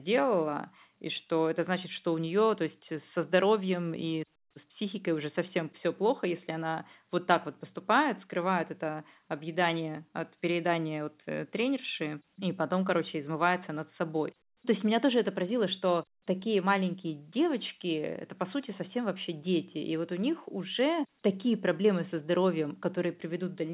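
The speech sits within the 4 kHz ceiling of G.711 telephone coding at 8 kHz, with the low quantisation noise of that logarithmic format following the level of the signal, and nothing in the signal departs from what that telephone path normally does.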